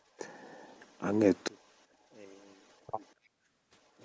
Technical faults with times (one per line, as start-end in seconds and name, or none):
0.89-0.98 echo leak
1.48-3.99 one channel inverted
1.59-1.84 echo leak
2.31-3.12 echo leak
3.17-3.48 background gated by the echo canceller